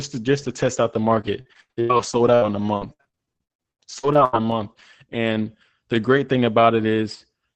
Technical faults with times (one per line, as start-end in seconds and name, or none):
1.15-4.77 repeated packet loss (robotic sound)